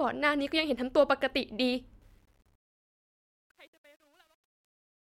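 From 2.02 s the speech fades out through truncation distortion, which fits about 11-bit undithered steps; from 2.86 s it turns gritty rather than thinning smoothly.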